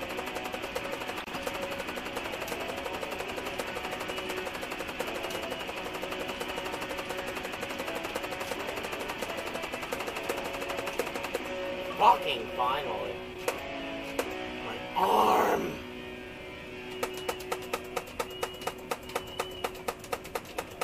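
Three short bursts of decoded frame corruption interrupt the audio. The longest runs from 1.20 to 1.37 s at a fairly prominent level, and its length points to a handful of consecutive damaged frames. A much quieter blip follows at 7.62 s, and a brief, fairly loud squeak sits at 15.03 s. Unlike a dropout or concealed packet loss, which leaves silence or a smeared repeat, these frames play wrong, spurious energy, so the result is chirpy noise.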